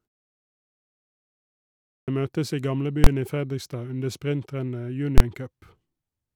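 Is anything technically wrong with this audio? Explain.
Yes, there are two kinds of fault.

At 1.48 s, after a silence of about 1.5 s, the sound resumes with a clipped start after a pause. The output device went idle during the silence and needed time to wake, so about 0.6 s is lost up to 2.08 s, and "møtes i" begins abruptly without its opening.

From 3.04 to 3.07 s, just after "møtes i", and again from 5.18 to 5.20 s, there are invalid numbers at full scale. A processing stage produced infinite or invalid values, which were pinned to maximum level for a 23 ms block, which fits a 1024-sample buffer. Each is heard as a single loud bang.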